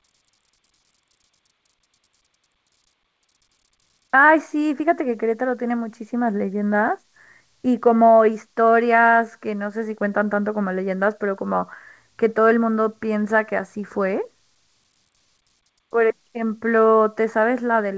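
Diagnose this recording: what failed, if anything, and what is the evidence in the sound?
Nothing failed here; every stage of the chain works.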